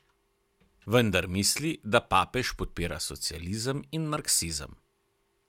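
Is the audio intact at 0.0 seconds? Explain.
Yes, the speech is intact at 0.0 seconds, with no fault at that moment.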